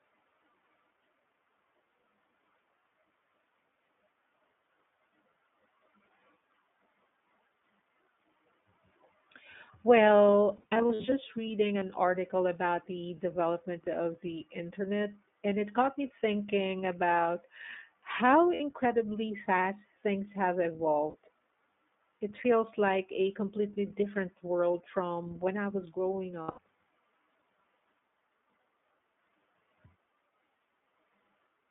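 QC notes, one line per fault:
Throughout, iLBC codec: narrowband, roughly 200 Hz to 3.6 kHz, with plainly audible rough, synthetic edges that fit 20 ms iLBC frames at 15.2 kbps.
10.56–11.13, 18.54–18.61, 21.10–21.16 and 26.42–26.59, lost iLBC frames: the decoder repeats the last pitch cycle with noise, giving brief buzzy held-vowel smears. The first is choppy bursts; speech snaps back instantly.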